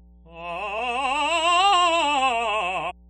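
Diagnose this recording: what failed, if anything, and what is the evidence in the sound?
The analogue wiring failed: a ground loop or nearby transformer is coupling the power line into the signal path. The result is mains hum, a steady 60 Hz tone with low harmonics, roughly 30 dB below the music and running under the entire recording.

At the codec stage, damaged data in a compressed stream corrupted frames, so the decoder misread them and lost sync while searching for the next valid header. Each loss is heard as a short chirp or blip, at 0.78 s and again from 2.89 to 2.92 s.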